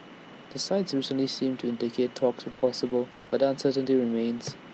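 From 2.51 to 3.33 s, packets drop out repeatedly: eight gaps, the longest 80 ms, together about 220 ms missing. The concealer stretches the last speech over each hole, so this stretch sounds choppy and robotic, with about a quarter of it patched.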